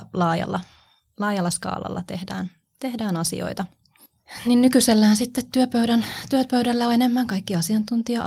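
No technical faults are audible in this speech.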